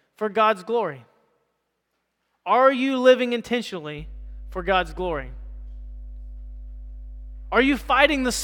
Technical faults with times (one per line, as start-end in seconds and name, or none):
3.99-8.44 mains hum